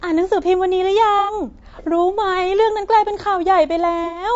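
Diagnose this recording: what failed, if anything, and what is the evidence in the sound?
The speech sounds rough and grainy throughout, with noise filling the gaps between pitch harmonics and a thin, synthetic-sounding top band. This points to the codec stage, likely low-delay AAC compression (AAC-ELD) at a low rate, consistent with around 32 kbps. At that rate it has too few bits to code the spectrum cleanly.

Two brief smeared, noisy patches appear at 1.19–1.33 s and 4.04–4.24 s. This is AAC frame loss with concealment, downstream of the network. The decoder bridged gaps of 90 ms and 120 ms by re-synthesising the last good spectrum with scrambled phase, which fits runs of three and four lost frames.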